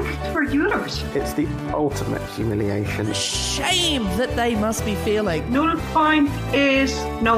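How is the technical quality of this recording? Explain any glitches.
No glitches can be heard anywhere in the recording. There is nothing here that needs explaining.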